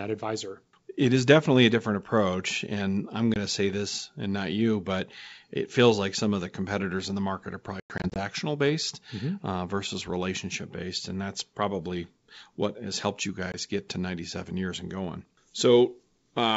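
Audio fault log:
3.34 to 3.37 s (about 20 ms), 13.52 s (about 20 ms), 7.8 to 8.2 s: packet loss on an ADPCM call. At 3.34 s, after "different approach and i'm" and before "to say this and", one packet drops out. At 13.52 s, after "what has helped you" and before "get to", another does. At 7.8 to 8.2 s, after "in the market are", about 180 ms is lost across 360 ms, in gaps as long as 100 ms, which fits roughly ten packets. Each gap is a hard-edged silence, and the G.722 decoder's predictor and step size lose track of the sender's, so the speech comes back slightly distorted before it settles.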